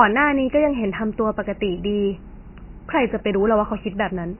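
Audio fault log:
Throughout, MP3 compression. The speech sounds heavily damaged, watery and swirling, with nothing above 3 kHz. Weak frequency detail flickers in and out between frames. S sounds lose their hiss. The likely cause is a bit-starved MP3 encoder, fitting a bitrate near 16 kbps.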